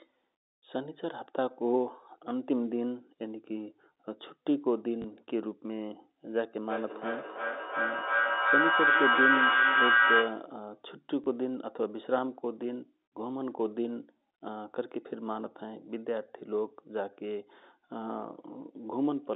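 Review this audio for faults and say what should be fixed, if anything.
A small blip at 5.02 s and again at 11.24 s is packet loss with last packet repeated. The receiver replayed about 20 ms of audio, which fits a single lost packet. A steadier network path or better jitter buffering and concealment would prevent it.

From 6.65 to 10.54 s a feedback howl builds near 1.5 kHz, pulsing roughly every 0.3 s and peaking about 3 dB above the speech. A microphone is picking up a nearby loudspeaker on the same call. Muting one device or using headphones would prevent it.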